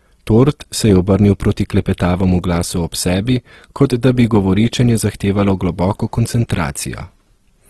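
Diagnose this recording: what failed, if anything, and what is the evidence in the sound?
The codec stage is at fault, likely Opus compression in its CELT music mode, fitting about 16 kbps. Damage is plainly audible across the speech. Nothing sounds above 12.5 kHz. Tones turn rough and grainy rather than swirly. Starved bands get filled with folded or noise content.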